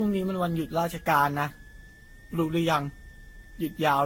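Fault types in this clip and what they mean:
Switching supply whistle: A high, thin whistle runs under the speech for the whole clip, its pitch wandering between roughly 1.66 and 1.84 kHz instead of holding steady. It sits about 30 dB below the speech. The drifting pitch fits a switch-mode power supply whose burst-mode or beat frequency has fallen into the audible range and shifts as its load changes.
Generation loss: The speech sounds swirly, smeared and hollow throughout, with blurred consonant attacks and a degraded quality worse than a single encode at this rate would produce. Nothing is present above about 16.6 kHz. This is likely the result of around ten successive decode-and-re-encode passes, consistent with a Vorbis-type codec near 58 kbit/s. Each pass adds its own quantisation noise and spectral gaps on a shifted frame grid, and these build up cumulatively.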